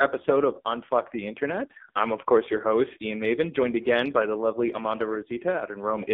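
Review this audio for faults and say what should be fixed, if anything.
Buzzy, synthetic speech is band-limited to roughly 250 Hz to 3.6 kHz throughout: AMR narrowband mobile codec damage, heavy, consistent with its lowest modes near 5.9 kbps. Capture over a wideband or direct path instead.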